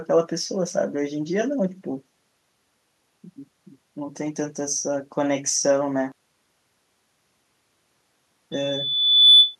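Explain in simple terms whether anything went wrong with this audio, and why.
Two things went wrong. From 6.12 to 8.19 s, one stereo channel was likely flipped upside down (one channel inverted), so when the two sides combine, the matching parts cancel. The speech drops almost to nothing, leaving only a faint trace.

Then, from 8.52 to 9.56 s, a microphone picked up its own loudspeaker, creating a loop, a loudspeaker feedback squeal. A single high tone near 3.5 kHz swells up over under a second until it rings out well above the speech.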